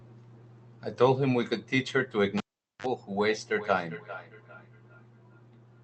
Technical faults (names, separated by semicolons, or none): cable pulled and plugged in; feedback echo between two devices